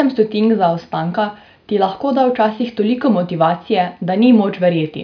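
No technical faults are audible anywhere in the speech.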